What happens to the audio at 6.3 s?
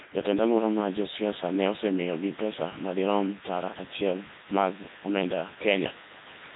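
At 6.3 s, as everywhere in the clip, the Codec 2 vocoder rebuilds the speech from sine waves, sounding robotic and buzzy, consistent with roughly 3.2 kbit/s. A spectrogram shows rigid, smeared harmonic stripes.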